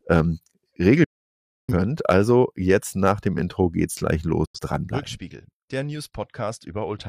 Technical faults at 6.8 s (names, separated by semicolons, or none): none